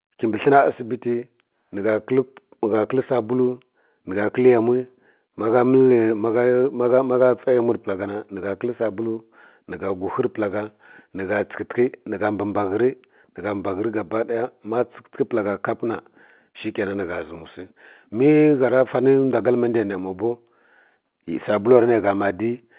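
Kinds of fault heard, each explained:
No faults are heard.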